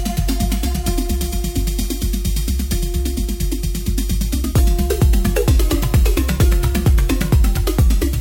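No technical faults are audible anywhere in the recording.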